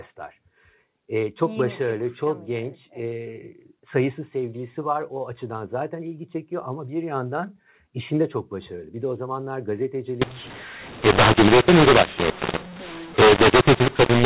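Up to 10.22 s the speech carries the band-limited G.711 telephone sound, with nothing above 4 kHz, fitting 8 kHz A-law coding. From 10.22 s to the end at 14.26 s, mu-law and A-law are mixed up: A-law bytes are read as mu-law, scrambling sample levels. Speech turns harsh and gritty, and pauses fill with hiss because the quietest values are lifted. Unlike plain clipping, the distortion persists at low levels and in silence.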